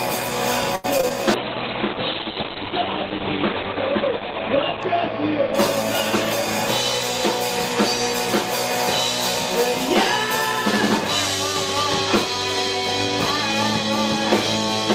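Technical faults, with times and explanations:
0.75–1.12 s, repeated packet loss (robotic sound): four gaps in under half a second, the longest 85 ms. The decoder stretched the last received sound across 126 ms of them and left 60 ms as silence, so about half of this span is invented or missing. The result is choppy, with pieces missing. On a waveform there are short dropouts and repeated look-alike cycles; a spectrogram shows smeared, steady harmonic bands and vertical breaks.
1.35–7.13 s, call bitrate drop: the encoder was pushed from 48 kbps down to 8 kbps, staying at the floor for about 3.2 s. At that rate the codec quantises coarsely and narrows its audio band from 20 kHz to 4 kHz, so the sound turns muffled, rough and watery until bits return. A spectrogram shows everything above 4 kHz abruptly blanked, with blotchy, grainy texture below. The waveform envelope looks softer and less detailed.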